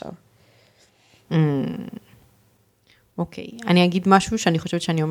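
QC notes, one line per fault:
0.00–1.46 s, channel delay (comb filtering): one channel lags the other by roughly one sample. Summed to mono, they cancel near 20 kHz, leaving a slight top-end dullness. Unlike a low-pass filter, this is a gentle slope into one deep notch that ends at 1.46 s.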